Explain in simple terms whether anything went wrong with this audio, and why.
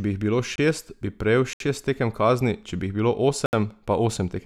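Three times the sound was replaced by a block of digital silence, most likely because the program didn't fill its output buffer in time. The sound drops out abruptly: a 23 ms gap at 0.56 s after "bi jih bilo", then 70 ms holes at 1.53 s after "bi prejel" and at 3.46 s after "če bi jih bilo".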